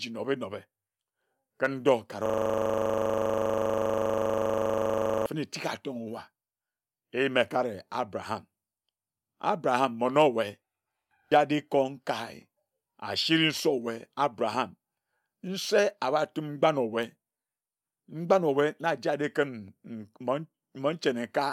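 From 2.26 to 5.26 s a system hang loop replays a 40 ms slice of the stalled buffer, a rigid 25 Hz buzz rather than silence.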